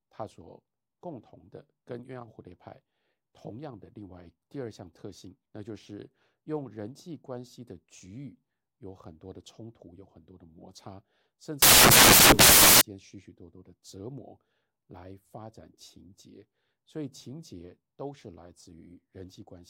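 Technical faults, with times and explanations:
11.62 to 12.81 s, samples built from the wrong bytes: for about 1.2 seconds the speech is replaced by loud, harsh broadband noise. The reader assembled each sample from its bytes incorrectly, through a one-byte offset, swapped byte order or a wrong alignment, so the rapidly fluctuating low-order bits landed in the most significant position. Those bits behave almost randomly, giving a harsh hiss.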